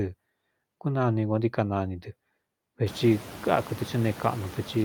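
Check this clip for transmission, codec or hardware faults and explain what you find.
Two related timing faults run through the speech, plus noise suppressor artifacts throughout.

Noise suppressor artifacts span the whole clip. The suppressor pulls bands it judges to be steady noise down by about 17 dB, frame by frame. This leaves the background pumping around the speech. When the room noise rises by about 23 dB near 3 s, it sits about 17 dB under the speech, and the gated residue becomes more obvious. On a spectrogram, the noise floor appears as patchy, flickering blotches rather than an even haze.

Clock drift between sender and receiver is present from start to finish. The sending clock runs roughly 4 percent fast, so the jitter buffer keeps overfilling and the receiver must discard audio to keep up. It sounds like a slightly rushed, unsteady pace. A waveform would show no gaps, just small uneven discontinuities.

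Repeated timing corrections run from 0.05 s to 4.85 s at a 104 percent effective speed. These are the receiver's small cuts, all in the same direction and unevenly spaced. Each one is small, heard if at all as a faint hiccup or skip in the flow. On a waveform they appear as tiny splice points where the cycles jump, and on a spectrogram as thin vertical seams in the harmonics.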